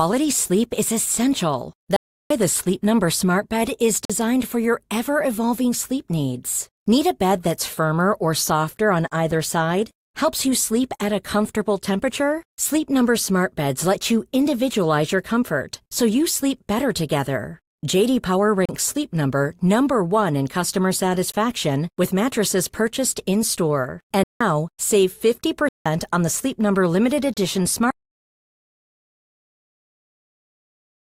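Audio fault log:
1.96–2.30 s, 4.05–4.10 s, 18.65–18.69 s, 24.24–24.41 s and 25.69–25.86 s: block of digital silence. The audio is replaced by zeros. The first hole, 341 ms right after "sleep is essential", fits a 16384-sample block. The two 171 ms holes fit 8192-sample blocks. The short 46 ms and 34 ms ones, including the one just before "for your ever evolving", sound like short holes.
21.32 s and 27.34–27.37 s: gap between stream segments. Silence of about 17 ms after "in customer" and 31 ms later is inserted where one 6-second segment hands over to the next, because the time stamps leave a space between them. The edges are hard, but nothing is missing. The sound resumes exactly where it stopped, and the gaps fall on the segment grid rather than at arbitrary points, which distinguishes them from blocks of digital silence.
27.91 s to the end: audio dropout to silence. The sound cuts off mid-flow and never returns. 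The remaining 3.3 s is silent with no room tone left. The likely cause is a lost input while recording continued. Its length, its completeness and the fact that it runs to the end separate it from the brief holes earlier in the clip.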